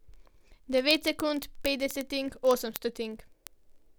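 From 0.12 s to the end, the speech carries word clock ticks. The receiving device runs unlocked, about a tenth of a percent off the sender's clock. Roughly every 20 ms a sample is dropped or repeated. This makes a fast, steady buzz of sharp ticks.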